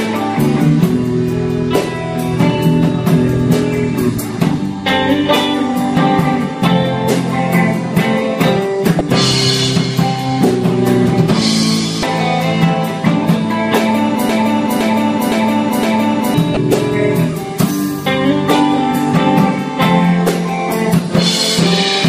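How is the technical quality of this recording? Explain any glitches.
The recording has two kinds of glitch. Damaged data in the compressed stream produces three short glitches, at 8.98–9.01 s, 12.00–12.03 s and 16.54–16.57 s. Each time, the decoder lost sync on bad frames. Unlike a loop, these are single blips, not repetition.

From 14.29 to 16.34 s there is a broken-record loop. A 0.51 s fragment repeats exactly four times, likely because playback stalled and resent its last buffer, and the audio from that stretch is lost.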